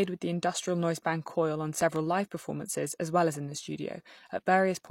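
A speech clip with a loud pop: two sharp pulses between 1.81 and 1.98 s, peaking roughly 10 dB above the speech, just before "live performances as well". Unlike a dropout, the speech carries on underneath. The cause is likely a static discharge or switching transient.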